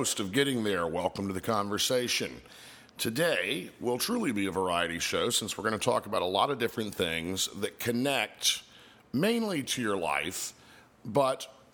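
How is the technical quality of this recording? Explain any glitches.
No glitches or faults are audible.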